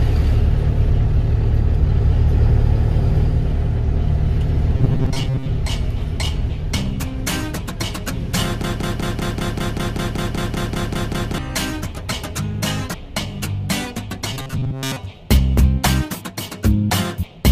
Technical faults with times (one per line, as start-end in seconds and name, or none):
4.74-5.52 robotic sound from repeated short buffers
8.64-11.38 broken-record loop
14.33-14.97 robotic sound from repeated short buffers